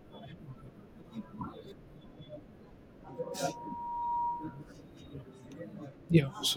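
At 3.04 s a loudspeaker feedback squeal begins: the microphone is hearing its own loudspeaker, and near 951 Hz the loop gain tops unity. The tone swells over roughly a second to a few dB above the speech, holding until 4.68 s.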